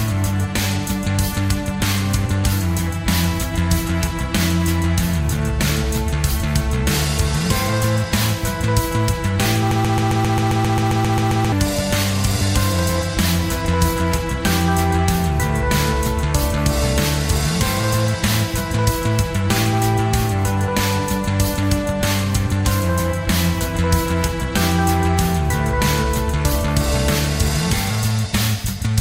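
At 9.71 s a broken-record loop kicks in: a 133 ms fragment repeats back to back 14 times until 11.52 s, likely a stalled player or stream.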